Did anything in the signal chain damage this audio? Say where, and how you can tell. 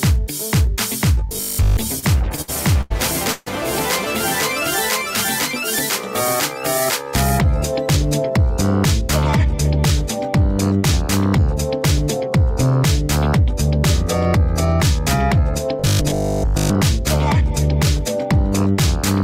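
Yes. At the driver or buffer stage, audio likely arrived too seldom, so short buffers were replayed in place of fresh audio, from 1.27 to 1.77 s and again from 15.8 to 16.78 s. That is robotic sound from repeated short buffers: most of the sound becomes a rigid metallic buzz at 50 Hz, which fits a 20 ms buffer.

On the network side, packets kept arriving late between 1.99 and 2.92 s, emptying the jitter buffer seven times. This repeated stall, or stutter, stretches the sound with 230 ms of filled-in continuation, the longest wait being 90 ms, though nothing is lost.

A call audio freeze from 3.32 to 3.48 s most likely came from packets held up in transit, draining the jitter buffer. The receiver carried the last sound forward for 140 ms, then resumed where it stopped, so a gap is inserted rather than anything removed.

From 7.97 to 8.38 s the jitter buffer had built up excess delay and the receiver trimmed it. 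This jitter buffer speed-up drops about 50 ms in small pitch-period cuts, so the sound runs at 109% speed and seems hurried, with pitch unchanged.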